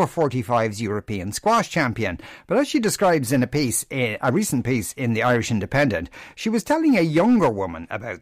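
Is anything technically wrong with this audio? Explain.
Yes. Hard clipping runs through the whole speech clip: the signal is driven about 6 dB past what the stage can pass, so around two percent of samples have their peaks sheared flat. Those flat tops generate high harmonics, heard as crackle on the louder syllables.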